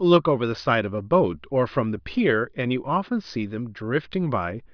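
No technical faults can be heard anywhere here.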